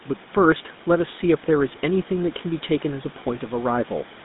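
Throughout, the GSM full-rate codec rebuilds the speech from sparse pulse excitation, leaving a plainly buzzy, gravelly roughness confined to roughly 150 Hz to 3.7 kHz.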